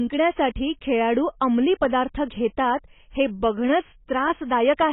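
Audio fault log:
Throughout: AAC compression. The speech sounds dull and smeared, with nothing above about 3.8 kHz, and a warbling, fizzy texture on sustained vowels and sibilants. This is likely low-bitrate AAC-LC, which fits a rate near 16 kbps. With so few bits per frame, the encoder lowers its cut-off and quantises the remaining frequency lines coarsely against its hearing model. That leaves shifting holes in the spectrum that sound like heavy, unsteady artefacts.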